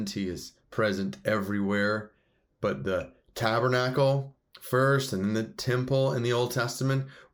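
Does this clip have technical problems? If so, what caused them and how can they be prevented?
No, nothing in this speech recording stood out as a technical problem on listening, so there is nothing here to trace to a cause or guard against.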